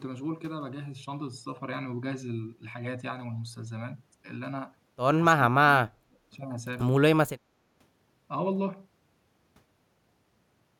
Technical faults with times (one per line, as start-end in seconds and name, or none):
5.31-6.19 speech suppressed in double talk